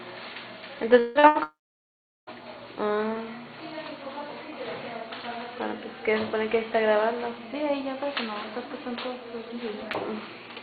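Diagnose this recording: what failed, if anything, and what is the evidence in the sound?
The network stage shows a long network dropout twice. At 0.99 to 1.18 s, about 160 ms is lost and replaced by a continued buzz or hiss. At 1.43 to 2.30 s, a fading fill gives way to about 0.74 s of silence. Audio resumes with the stretch missing, likely a stalled stream.

At 1.19 to 1.26 s there is short concealed packet loss. About 40 ms never arrived in time. The decoder extended the preceding sound across the hole and blended back into the real audio. It is heard as a brief smear.

A burst of packet loss follows at 1.27 to 1.38 s. About 80 ms of consecutive audio was lost on the network. The receiver held the last sound and turned it down through the gap. The sound then jumps ahead, with the missing part gone.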